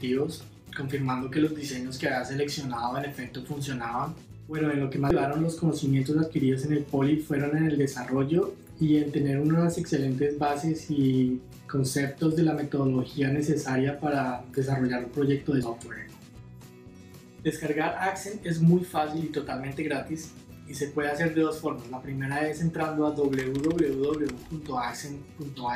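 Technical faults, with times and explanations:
5.10 s and 15.63 s, damaged data in a compressed stream: corrupted bytes make the decoder misread frames and lose sync, producing a brief blip.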